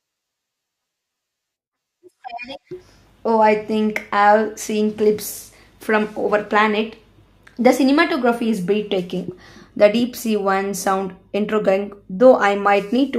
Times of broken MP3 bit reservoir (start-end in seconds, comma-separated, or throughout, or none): none